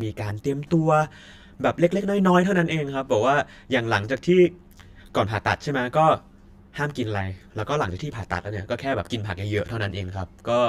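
From start to finish the speech has channel delay (comb filtering): one side arrives roughly 10 ms late, and once the two are folded to mono the shared content cancels in evenly spaced notches, the first down around 40 Hz. That leaves the voice hollow and phasey throughout.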